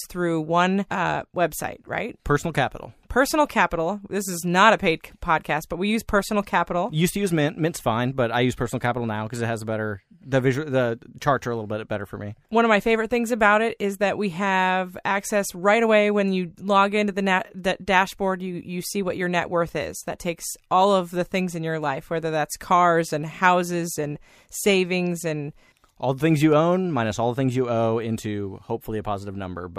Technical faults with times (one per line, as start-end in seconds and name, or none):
none